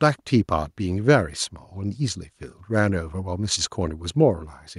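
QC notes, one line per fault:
No faults heard in this speech.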